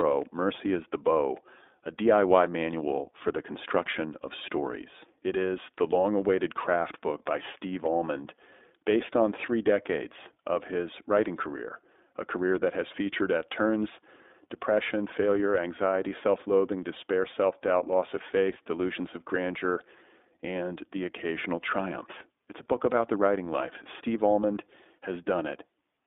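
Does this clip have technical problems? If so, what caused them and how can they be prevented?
Yes. iLBC codec damage runs through the whole clip. This speech is squeezed into a telephone band of roughly 250 Hz to 3.6 kHz, so it sounds thin and muffled, with no air above that. The codec rebuilds the excitation of each 20 ms frame on its own, without carrying detail over from the previous frame, which gives the plainly audible rough, synthetic grain, consistent with iLBC's 15.2 kbps mode. To prevent it, record or transmit through a wideband codec at a higher bitrate instead of a narrowband VoIP path.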